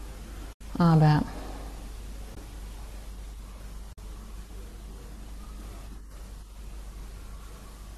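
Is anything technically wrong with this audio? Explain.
Yes. AAC frame loss with muting occurs at 0.53 to 0.61 s, 2.35 to 2.37 s and 3.93 to 3.98 s, lasting about 80, 20 and 50 ms, which fits runs of short low-delay AAC frames. The decoder zeroed the missing spectrum, and the overlapping windows taper the speech down and back up, leaving soft-edged silent holes. The speech also has a faint coding texture, likely from low-delay AAC compression.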